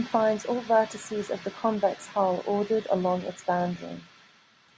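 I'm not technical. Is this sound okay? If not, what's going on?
Yes, no faults here.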